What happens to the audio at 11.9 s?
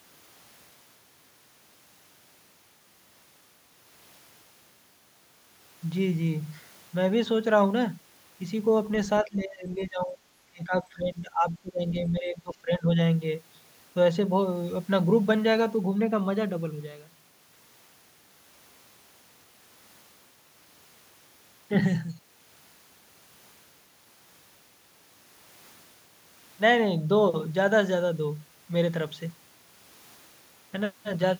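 At 11.9 s the speech is in a stretch of speech suppressed in double talk, from 10.5 to 12.98 s. The level dips, by about 20 dB at its deepest. An echo canceller likely mistook this talker for loudspeaker echo and turned it down.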